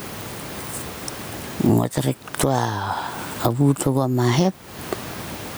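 Gain pumping runs through the whole clip. Room noise sits about 35 dB below the speech. The swing is about 20 dB. The likely cause is input gain set far too high, with a fast limiter or compressor clamping every loud sound. Loud and soft passages end up squashed close together.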